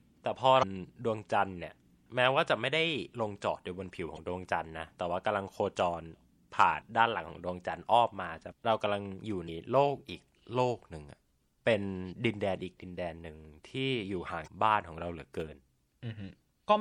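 A watery, swirly quality with dulled treble runs through the whole recording, the sound of MP3 compression, likely at a low rate that fits about 64 kbps, where the encoder trims the top end and drops quieter frequency detail from frame to frame. Brief chirps and blips interrupt the speech at 0.59 to 0.64 s, 4.15 to 4.19 s, 8.51 s, 9.45 to 9.49 s and 14.44 to 14.48 s. These come from damaged data in the compressed stream: the decoder misreads the corrupted frames, loses sync and skips ahead to the next frame header.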